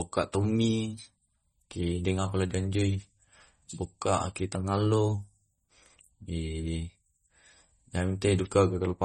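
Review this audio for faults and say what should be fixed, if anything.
The whole clip sounds watery and swirly, with nothing above 16.5 kHz. This is likely MP3 compression, at a rate that points to about 32 kbps. Starved of bits, the encoder drops weak frequency lines frame to frame. Encoding at a higher bitrate would prevent it.

From 0.94 to 1.52 s and from 4.55 to 5.14 s, the speech runs 5.75% fast. Pitch rises about 97 cents, nearly a semitone, then snaps back. This is likely a drift correction step, with clock-matching software changing the rate abruptly to rebalance its buffer. Smooth, gradual resampling would prevent it.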